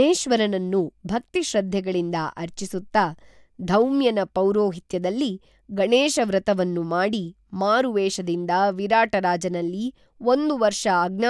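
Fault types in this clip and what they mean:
Nothing stood out on listening to the speech in the clip.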